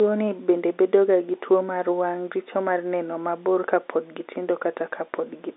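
No technical faults occur in this telephone-band speech, so there is nothing to describe in time order.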